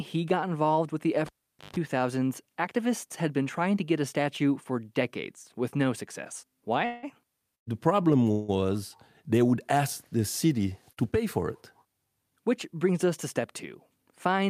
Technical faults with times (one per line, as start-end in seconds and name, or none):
1.26-1.76 cable pulled and plugged in
6.85-7.05 call audio freeze
7.55-7.69 call audio freeze
8.31-8.50 call audio freeze
10.92-10.99 short stall from a late packet